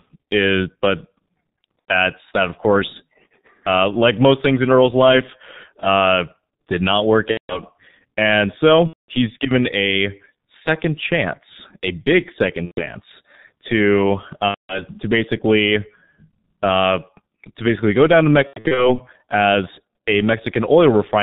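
Throughout, the speech passes through the G.723.1 codec at 6.3 kbit/s, heavily degraded. It uses 30 ms frames and a slow-updating voice model and passes nothing above 4 kHz, leaving the speech muffled and hoarse, with smeared consonants.

VoIP packet loss concealed by the speech codec interrupts it six times. The decoder fills each gap by extending its last pitch and filter at falling gain, so the speech turns into a fading buzz or tinted noise and stays weak briefly afterwards. This happens at 1.79–1.93 s (90 ms lost), at 7.31–7.61 s just after "uh did not work" (180 ms), at 8.87–9.10 s just before "given a second chance" (210 ms), at 12.65–12.81 s after "second chance a big" (120 ms), and at 14.48–14.85 s (210 ms). At 18.47–19.00 s, 210 ms of losses are scattered over about 300 ms, with gaps of up to 90 ms, producing scattered patches of fading buzz or noise.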